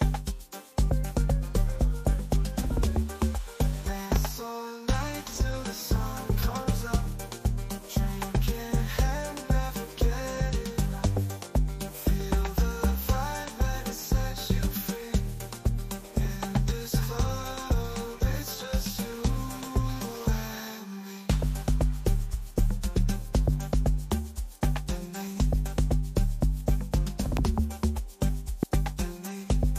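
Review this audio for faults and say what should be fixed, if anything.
Loud pops at 4.16–4.18 s, 27.37–27.39 s and 28.63–28.65 s: each is a single sharp pop roughly 15 dB above the sound, which carries on beneath. A sudden voltage step, likely from a plug, switch or static, entered the signal as a brief pulse.

To prevent these, secure cables and connectors, avoid switching or plugging equipment while recording, and ground the setup against static discharge.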